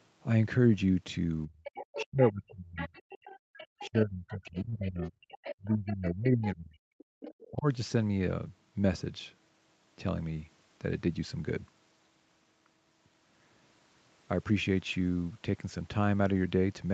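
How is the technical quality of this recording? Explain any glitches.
The recording has clear echo-canceller trouble during the first eight seconds or so, all within a call path that passes nothing above 8 kHz, which fits wideband Opus at around 48 kbps.

Speech suppressed in double talk occurs from 1.46 to 2.92 s and again from 3.87 to 7.66 s. When both ends talk at once, the canceller cannot tell the near talker from loudspeaker echo, so it pulls the whole microphone signal down. The speech here dips in patches, by roughly 35 dB in the first stretch and about 40 dB in the second, totalling around one second and three seconds of loss. Overlapping talk is the likely cause.

The other side's voice leaks through from 1.64 to 6.47 s, and briefly again from 7.2 to 7.48 s. The far party's audio, played on the talker's loudspeaker, reaches the microphone, and the canceller leaves a residue. In the long stretch, a second voice sits underneath, roughly 15 dB below the main speech, and in the short burst it is fainter, about 20 dB down. 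Incomplete echo removal is the likely explanation.

The background is gated by the echo canceller from 3.39 to 3.57 s. While the loudspeaker was active, the canceller clamped the microphone hard. The room sound drops by about 38 dB for roughly 200 ms, a sudden hole in the ambience, and then snaps back once the canceller releases.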